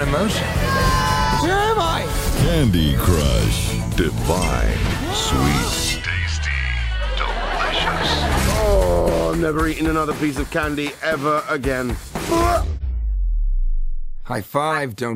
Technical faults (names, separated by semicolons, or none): corrupt frame decoded